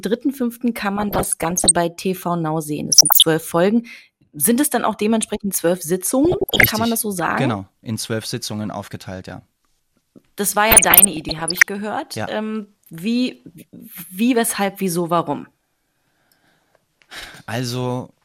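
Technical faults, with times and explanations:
0.97–1.71 s, 2.92–3.23 s, 6.25–6.68 s (after "dann auch dementsprechend zwölf"), 10.71–11.66 s: DAB burbling. Short noise blips in single sub-bands over the speech, pointing to bit errors around 0.7–1% slipping past error correction and corrupting MP2 samples and scale factors, so individual sub-bands jump in level for up to a frame.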